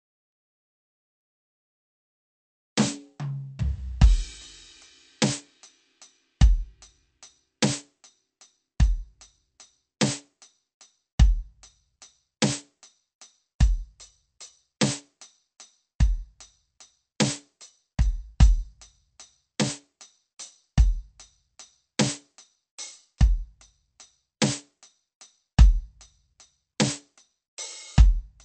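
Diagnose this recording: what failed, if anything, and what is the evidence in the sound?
Codec stage. The music has nothing above 8.3 kHz and a plainly audible watery swirl. Likely cause is MP3 compression at a low bitrate, cutting treble and dropping weak lines.

Codec stage again. Pre-echo at 13.59 s and 14.80 s: a 13 ms hiss precedes each attack. Block-spread quantisation noise fills the quiet moment before the attack.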